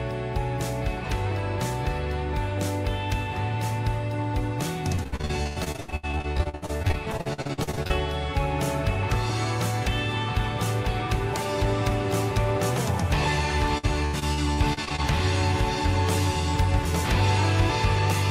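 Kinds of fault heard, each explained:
Repeated packet loss (robotic sound): Chunks of audio went missing or arrived too late, one after another. Each hole was patched by stretching the sound just before it. From 4.95 to 7.92 s, dozens of short gaps crowd together. About 41 percent of that stretch is patched, and the longest hole is 90 ms. A second burst runs from 13.78 to 15.00 s. There 26 percent is patched, and the longest hole is 82 ms. Both stretches sound choppy, with pieces missing.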